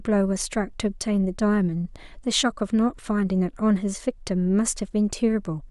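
Speech recording with no technical faults identified across the clip.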